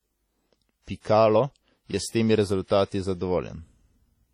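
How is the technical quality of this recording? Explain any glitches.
The speech carries heavy, steady codec damage from start to finish. Throughout, the audio sounds washy and ringing, with a hiss that swells and fades along with the talking and a thin, hollow edge where quieter detail has dropped out. This is likely WMA compression at a low bitrate, consistent with roughly 32 kbps. The transform codec's long blocks smear quantisation noise over tens of milliseconds, and weak spectral lines are discarded entirely.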